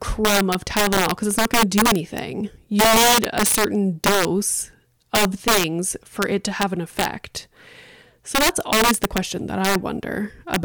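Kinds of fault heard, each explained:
Integer overflow: Gain pushed the signal about 7 dB past the largest value the integer format can hold, and instead of being limited, the excess wrapped to the opposite sign. A small share of the loudest speech peaks flip across the full range, producing violent cracks much harsher than clipping.
CD scratch ticks: A disc blemish destroyed more data than error correction could rebuild, so the player patched or muted the damaged samples. Six brief ticks, the longest a couple of milliseconds, fall between 0.71 and 1.31 s, after "crumb of" and before "it's not going to".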